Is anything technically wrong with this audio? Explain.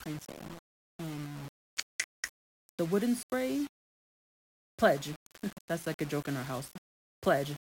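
Yes. Likely low bit depth without dither throughout: speech rounded to about 6 bits leaves error tracking the signal, so quiet passages turn gritty, with grainy distortion roughly 20 dB below the voice.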